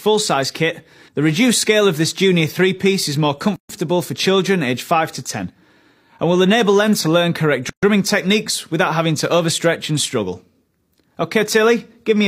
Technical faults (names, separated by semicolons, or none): gap at a join of encoded pieces